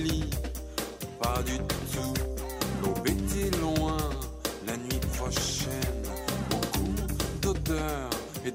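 At 6.91 s the stream likely lost a couple of samples, so the waveform jumps abruptly; these dropped samples are heard as one sharp click.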